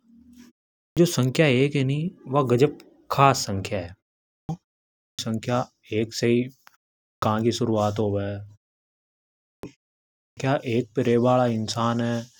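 Speech resumes abruptly at 0.75, 4.3, 4.97, 7.03, 9.44 and 10.17 s, each time missing its first 0.19 to 0.22 s. This is a clipped start after a pause: the output device sleeps through each preceding silence and wakes too late.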